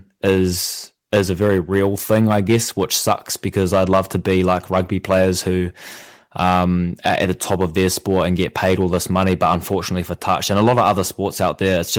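Hard clipping runs through the whole speech clip. The signal is driven about 8 dB past the limit, flattening a small share of peaks into harsh crackle.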